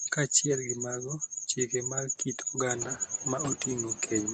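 Noise suppressor artifacts run through the whole recording. The suppressor pulls down every band it judges to be steady noise, frame by frame, so the background dips between syllables and swells back under them. What separates this from a codec's warble is that the background follows the level of the speech itself, and it grows more obvious once the room noise rises by about 10 dB near 2.5 s.

Speech cut by the noise suppressor occurs in four stretches: 0 to 0.44 s (about 14 dB at its deepest, roughly 150 ms affected), 0.61 to 2.58 s (about 18 dB, around a second in total), 2.79 to 3.4 s (about 17 dB, roughly 300 ms), and 3.56 s to the end (about 17 dB). Quiet consonants and word endings are treated as noise and turned down, so they sound swallowed. Unlike a dropout, the sound never falls to silence; only the soft parts sink.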